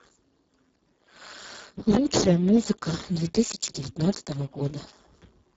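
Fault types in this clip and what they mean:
Speex codec: heavy Speex coding, pointing to roughly 5.8 kbps, leaves the speech hoarse, with nothing above 7.8 kHz and only noise-like fill up high.
Train of clicks: from 3.35 to 4.33 s, about seven regular clicks at 6.17 per second, well above the speech level, likely from interference or a faulty connection.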